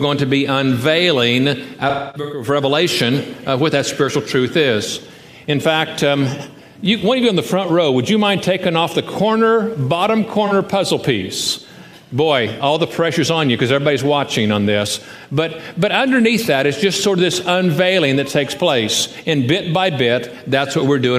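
From 1.89 to 2.47 s, AAC frame loss with concealment leaves a smeared, hazy stretch. The decoder re-used the last good spectrum across a gap of around 300 ms, so the sound thins and decays before recovering. About 340 ms in all goes missing, which points to several lost frames. A spectrogram shows horizontally blurred, frozen-looking bands there. At 10.46 s a single lost frame of about 43 ms causes a brief phasey smear, a narrow smudged column.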